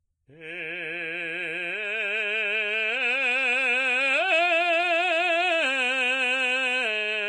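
Throughout the music, the treble turns hissy and grainy, with roughened tones and smeared attacks, likely Vorbis compression at a low bitrate around 30 kbps. A spectrogram shows a hard ceiling near 10.6 kHz and noisy, mottled upper bands.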